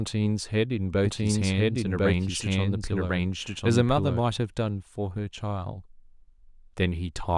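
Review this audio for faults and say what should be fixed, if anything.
From 1.05 s to 4.19 s the speech carries a doubled audio track: a second full-band copy trailing by about one second at roughly equal loudness, likely from a second, slower capture path mixed in. Unlike room echo, the copy has no decay or reverberant colour, and it starts and stops abruptly. Route each source through only one capture path and check edits for duplicated, offset regions before mixing down.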